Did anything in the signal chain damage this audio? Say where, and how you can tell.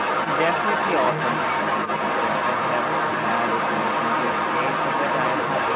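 Yes. The echo canceller in the call processing likely left the loudspeaker pickup of the far end's voice in the microphone signal, so the other side's voice leaks through for the whole clip, 0 to 5.76 s. It sits about 5 dB louder than the talker, inside a band ending near 4 kHz.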